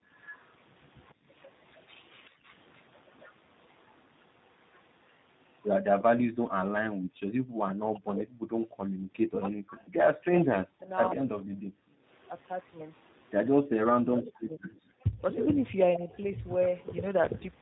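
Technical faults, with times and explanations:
Throughout: tandem speech coding. The voice passes through two speech coders in a row, the last likely a low-rate G.729A-type codec, so it sounds rough and warbly and has nothing above 3.8 kHz.
0.1–6.02 s and 9.84–17.61 s: echo leak. A faint delayed copy of the voice, about 30 dB down and 145 ms late, is heard, likely loudspeaker sound the echo canceller failed to remove.
2.3–2.42 s and 6.95–7.21 s: background gated by the echo canceller. The room sound briefly drops by about 25 dB and then about 40 dB as the canceller clamps the microphone, then returns.
7.69–11.73 s and 13.51–16.08 s: speech suppressed in double talk. The talker's voice dips deeply, by up to about 40 dB, likely because the canceller turned down both sides during simultaneous talk.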